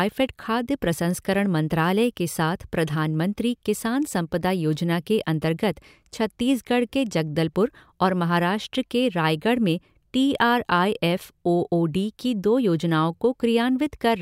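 No dropouts, distortion, noise bursts or timing errors turn up anywhere in this speech recording, so there is nothing to report.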